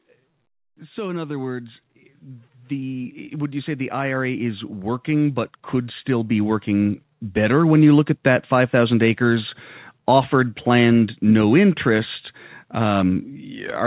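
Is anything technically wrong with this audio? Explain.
Yes. From 0.05 s to 7.98 s the automatic gain rising fault occurs: the gain control judged the incoming speech too quiet and kept turning its gain up, by about 16 dB in all. Voice and background swell together, steadily louder, across the call's 4 kHz-limited band.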